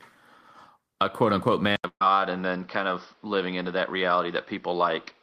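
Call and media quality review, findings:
Input switched to a poorer device, 1.76 s to end: 80 ms silence, then band-limited to 6 kHz, dull and boxy, with a new noise floor roughly 40 dB down. Level unchanged. Likely cause: capture moved to a lesser mic or headset call profile. Unlike codec bandwidth drop: new tone and noise character, persistent, no recovery.

Burst of packet loss, 1.87–2.02 s: about 140 ms of audio missing. Jitter buffer concealment extends the last sound for 132 ms, fading to buzz or hiss, with 80 ms silent. Resumes further on, with content skipped. Unlike the device switch: brief, self-healing.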